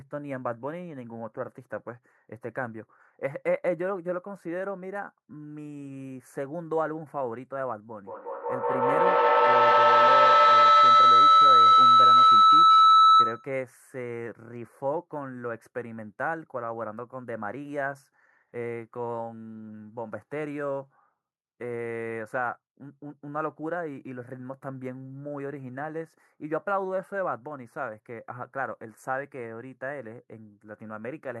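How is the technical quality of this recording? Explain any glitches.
One real problem here: from 8.06 to 13.64 s there's a feedback howl. Two devices in the room are sharing a call, so each mic-to-speaker trip adds gain. It swells to about 14 dB over the speech, ringing near 1.5 kHz and pulsing roughly every fifth of a second.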